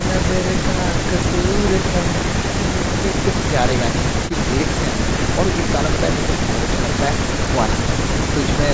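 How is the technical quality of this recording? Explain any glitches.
Nothing goes wrong anywhere in this speech recording; it has simply passed through a call's microphone processing, so the very lowest bass is trimmed off and nothing reaches above 8 kHz, which is just how that path normally sounds.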